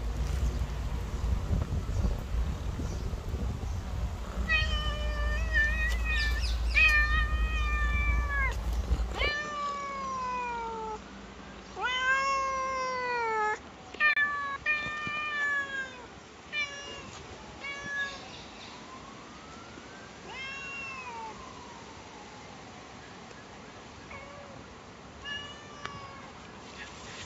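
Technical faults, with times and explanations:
9.29 s to the end, input switched to a poorer device: the sound abruptly goes duller, with nothing above 7.6 kHz, drops about 5 dB in level and gains a faint new noise floor roughly 50 dB down, with no silence at the change, likely because the recording jumped to a narrower-band microphone or headset.
14.13 to 14.17 s, gap between stream segments: a hard-edged hole of about 32 ms cuts into the sound because two consecutive 6-second segments' time stamps don't quite meet, so the player pads the difference with silence, though no actual audio goes missing.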